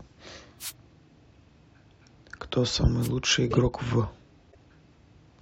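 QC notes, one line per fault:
0.59–0.72 s and 3.01–3.08 s, wireless microphone noise hit: two short swishes of static rise over the speech, the first lasting about an eighth of a second and the second about 70 ms. The FM radio link from the microphone momentarily faded as reflected copies of the signal cancelled the direct one, so the receiver's own hiss climbed up through the speech.
1.35 s, 3.51–3.57 s and 4.52–4.55 s, corrupt frame decoded: three brief blips with misplaced spectral content. The one at 1.35 s is barely audible, very faint at around -60 dBFS. The one at 3.51 s is loud, peaking near -15 dBFS. The one at 4.52 s is moderate, around -40 dBFS. Each spans a few damaged codec frames. Flipped bits made the decoder read wrong gains and codes, so energy landed at wrong frequencies until clean frames resumed.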